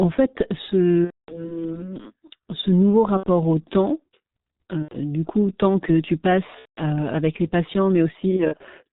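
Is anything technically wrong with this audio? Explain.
Yes. Two faults are audible.

Throughout, the speech carries G.723.1 codec damage, and it is heavy. Nothing above 4 kHz survives, so the voice is muffled. The codec works in 30 ms frames and updates its model of the voice slowly. That leaves a hoarse, rough texture and smeared consonants. The thin, coarse quality fits a low rate of about 6.3 kbit/s.

VoIP packet loss concealed by the speech codec occurs five times. When packets go missing, the decoder keeps rebuilding sound from its last pitch and filter while lowering the gain. The first gap runs from 1.04 to 1.57 s. The sound there fades and then goes silent, which suggests about 240 ms of lost audio. Shorter gaps follow at 3.17 to 3.28 s, just before "au temps", and at 4.82 to 4.97 s. Another runs from 6.59 to 6.80 s, between "coup tant que tu" and "avec les patients". The last, from 8.36 to 8.63 s after "avec les patients", is a scatter of brief dropouts. 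Each lasts no more than 30 ms. Because each frame builds on the one before, the voice stays weak and distorted briefly after each gap.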